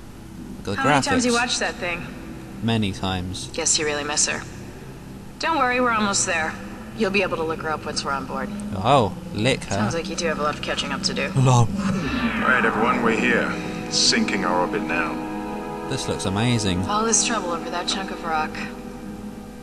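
No technical faults can be heard anywhere in this audio. Nothing in it calls for a timestamp or further comment.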